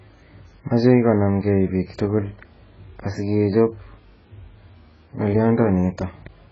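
Throughout the speech, nothing sounds above 7.6 kHz. It is dull and smeared, with warbling sibilants. The likely cause is heavy AAC compression, near 12 kbps.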